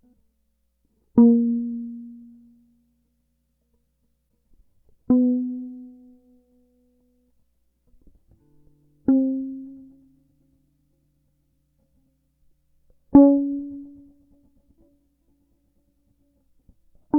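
At 4.25 s an AAC frame loss with muting zeroes the spectrum, and the music fades out and back in around a brief 43 ms dip.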